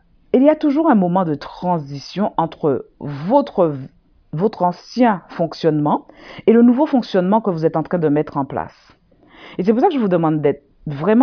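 No technical faults can be heard in the speech recording; the signal holds steady throughout without any audible disruption.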